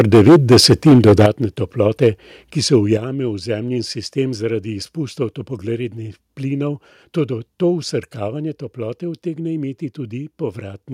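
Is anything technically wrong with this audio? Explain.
Yes. The opening speech, from 0.0 to 1.26 s, is harsh and crackly, with a large share of its peaks flattened. Brief crackles return at 2.02 to 2.07 s and 2.73 to 2.76 s. This is likely microphone overload: input gain set so high that peaks run about 10 dB past the converter's ceiling at the start, and about 2 dB and 1 dB later, so their tops are sliced off.

Voice and background then drop abruptly in level at 1.26 s by about 10 dB, at 2.97 s by about 6 dB, and at 8.28 s by about 3 dB. This is likely the microphone volume being stepped down by the call software, the first two cuts following the clipped stretches.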